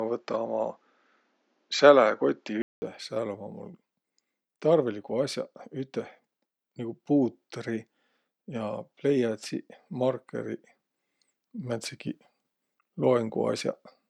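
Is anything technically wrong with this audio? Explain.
Yes. Input switched to a poorer device, 0 to 2.82 s: the speech there stops at 7.6 kHz, carries a faint separate noise floor and sits at a different level. It was likely captured on a narrower-band microphone before a 200 ms silence marks the changeover.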